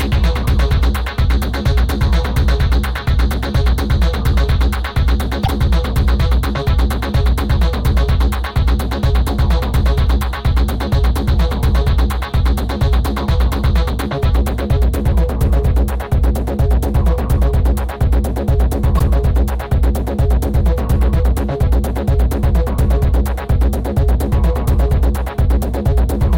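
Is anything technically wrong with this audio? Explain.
Yes. Damaged data in a compressed stream at 5.42–5.48 s and 18.95–19.01 s: corrupted frames throw the decoder out of sync, producing short chirps, squawks, clicks or holes that show as broadband vertical smears with abrupt waveform breaks.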